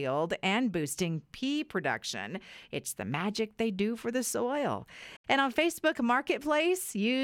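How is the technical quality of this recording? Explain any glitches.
The recording has one clear fault, a Bluetooth dropout. It comes at about 5.16 s, right after "do for the soil", and lasts until 5.25 s. The speech cuts to silence, then returns. Roughly 75 ms of sound is missing, and the speech resumes further on, as if it kept playing during the gap. The likely cause is audio packets reaching the headphones too late and being discarded, several in a row.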